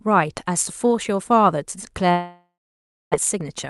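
From 2.11 to 3.16 s there is a long network dropout, likely from packets never arriving. A fading concealment buzz is followed by about 0.6 s of flat, empty waveform, and the sound resumes with 600 ms gone.

From 3.34 s to the end at 3.70 s, a jitter buffer speed-up removes short pitch-period pieces, about 70 ms in total. This plays the audio 15% faster at unchanged pitch, and the spectrogram shows compressed harmonic stretches.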